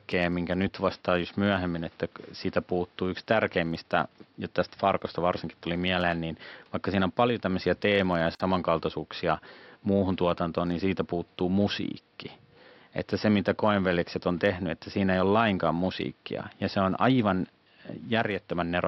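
At 8.35 s the speech drops out abruptly for about 49 ms, a clean hole in otherwise continuous sound, its edges smeared, and then carries on exactly where it stopped. This is a gap at a join of encoded pieces: the audio was encoded in separate segments and joined without trimming, so the encoder's start-up delay and the padding of the last frame both remain as silence. The low room noise, about 37 dB below the speech, vanishes with it.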